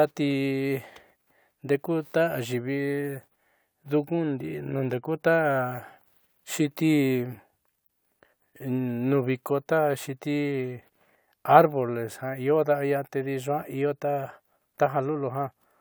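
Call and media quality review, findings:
Call and media quality review findings: no faults heard in this speech clip.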